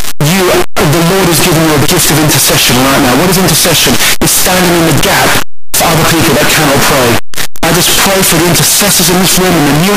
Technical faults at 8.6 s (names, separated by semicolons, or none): signed and unsigned mixed up